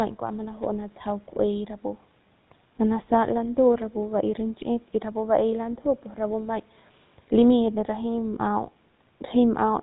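Throughout the speech, the GSM full-rate codec is plainly audible. This early mobile codec models the vocal tract as a filter and excites it with regularly spaced pulses, keeping only every third excitation sample. The voice comes out buzzy and gravelly. Nothing survives above 4 kHz, so the sound is narrow and muffled at the top. The damage fits the 13 kbps full-rate mode. The call microphone processing's high-pass filter takes out the lowest bass, which is normal and not a fault.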